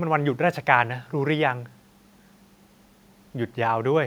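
Speech sits well above a low background of room noise at about 41 dB below the speech level, with no technical fault in the signal.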